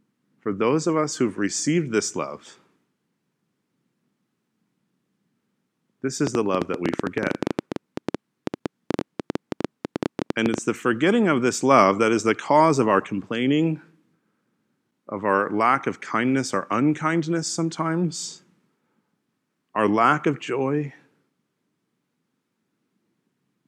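Speech with a train of clicks from 6.27 to 10.59 s: some fifty similar pops, about 10.7 per second at uneven spacing, peaking roughly 15 dB above the signal. Unlike random crackle, they share one shape and tick through pauses, likely interference or a faulty connection.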